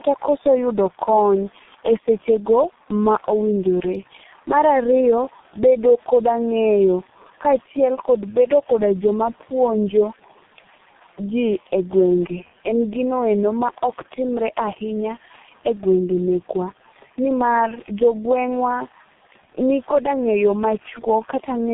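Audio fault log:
Throughout, tandem speech coding: AMR-NB then G.723.1, the second re-encoding the first's damage, so it's rough and warbly, with nothing above 3.8 kHz.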